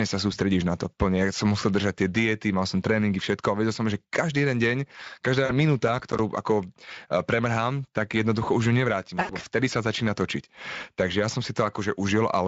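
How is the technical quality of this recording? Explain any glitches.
Three glitches interrupt the recording: two packet-loss gaps and one crackle burst, all over a Speex speech stream at about 27.8 kbps with light coding roughness.

At 5.45 to 5.59 s and again at 9.21 to 9.31 s, between "jednoducho už ju nevrátim" and "vtedy sa začína točiť", there is VoIP packet loss concealed by the speech codec. The decoder stretched its last pitch and filter over missing frames with decaying gain, so the audio turns briefly into a fading tone or coloured noise. The gaps fit about 40 ms and 80 ms of lost frames, and the sound stays weak for a moment after packets resume.

From 5.88 to 6.19 s there is processor overload crackle. The processor missed a handful of deadlines on roughly 10 ms buffers, and each missed buffer played out as a hard-edged dropout to silence. Together the dropouts form a short gritty tearing laid over the audio, which clears once the load eases.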